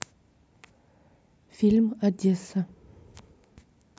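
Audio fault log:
No technical faults can be heard in the speech signal.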